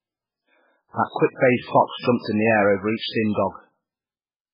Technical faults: MP3 compression

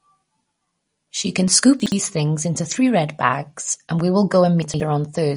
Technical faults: MP3 compression; chunks out of order

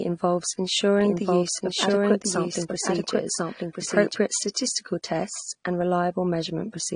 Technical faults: transcoding between lossy codecs; doubled audio track

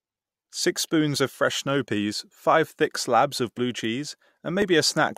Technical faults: dropped buffer (overrun)

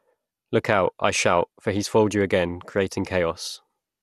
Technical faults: MP2 compression

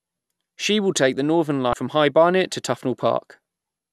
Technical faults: damaged data in a compressed stream

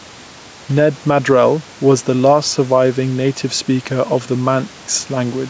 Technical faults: gain pumping

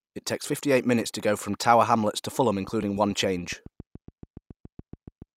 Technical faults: train of clicks

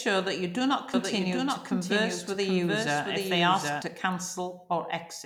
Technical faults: doubled audio track

